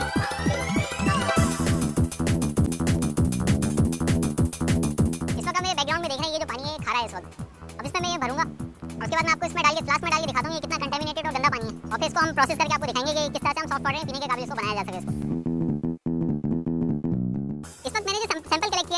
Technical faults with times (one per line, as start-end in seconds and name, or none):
0.00-18.97 wrong sample rate